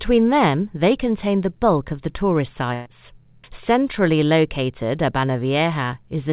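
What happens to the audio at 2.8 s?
A burst of packet loss runs from 2.74 to 2.88 s. About 120 ms of audio never arrived in time, so the receiver stretched the last sound across the gap, fading it, then resumed later with that stretch missing.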